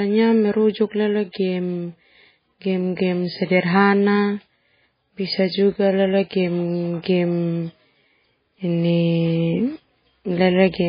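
MP3 compression runs throughout the speech, with heavy codec damage and nothing above 5 kHz. The likely cause is an MP3 encode at a very low bitrate, which fits about 16 kbps. With so few bits the encoder drops weaker frequency lines, so they flicker in and out from frame to frame and leave a watery, swirling texture. The fixed treble cutoff dulls the s sounds, and attacks are smeared.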